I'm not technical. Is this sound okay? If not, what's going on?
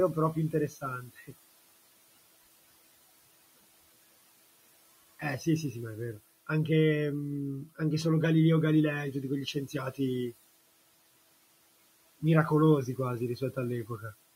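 No. The noise suppressor, which is meant to remove background sound, mistook bits of speech for noise, causing speech cut by the noise suppressor at 0.52 to 0.83, 1.01 to 1.34 and 9.46 to 9.75 seconds. Those moments sound swallowed or suddenly faint.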